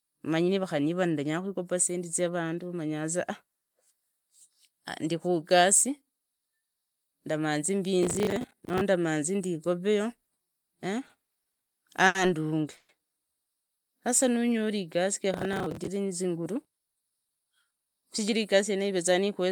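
From 8.03 to 8.81 s a gritty, tearing crackle rides over the speech, made of dense clicks with hard edges that stop abruptly at the end. This is processor overload crackle. The processor could not finish its audio buffers on time, and each missed deadline was filled by replaying a scrap of old audio. The texture fits buffers of around 10 ms failing dozens of times in a row.

Between 11.07 and 11.69 s the speech drags and catches four times, and each catch sounds like a sound clinging on for a moment. These are repeated stalls (stutter). Packets kept arriving late, so the jitter buffer kept running dry. The receiver extended the last sound each time, for 110 ms in total and at most 50 ms at once, then carried on. Nothing is lost, but the flow is broken.

At 12.07 s one sound hangs on too long, for about 80 ms, with a slight buzzy quality, and then the speech resumes exactly where it left off. 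This is a short stall from a late packet. A single packet missed its slot, and the receiver stretched what it already had until the packet turned up. The playback delay grew by 80 ms as a result.

From 12.77 to 12.91 s the audio briefly turns into a fading buzz, about 120 ms long, without dropping to silence, and then continues with nothing skipped. This is a call audio freeze. Delayed packets likely left the jitter buffer empty, so the receiver kept synthesising the last sound until delivery caught up. This adds another 120 ms of delay.

Between 14.01 and 14.81 s the speech slows to about 91% of its pace while the pitch stays put, so syllables sound drawn out. This is a jitter buffer slow-down. To rebuild its reserve, the receiver repeated single pitch periods and snippets of pauses, which added 79 ms over that stretch.

From 15.34 to 15.87 s the same harsh processor overload crackle returns. 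It is shorter this time, and the missed buffers of around 10 ms number a couple of dozen. Again each one is filled with stale audio, which produces the sharp, sandy tearing.

From 16.72 to 18.92 s the speech sounds hurried, at about 108% speed with unchanged pitch. This is a jitter buffer speed-up. The buffer held more audio than its target, so the receiver trimmed out short pitch-period slices many times in a row, about a fifth of a second in total.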